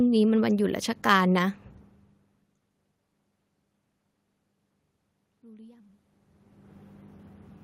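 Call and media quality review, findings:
Speech and room noise swell together, 5.41–6.08 s, about 3 dB louder over roughly 0.7 s. Automatic gain rising: the AGC responds to an input drop of about 24 dB, near a talker movement around 6 s, by ramping its gain up.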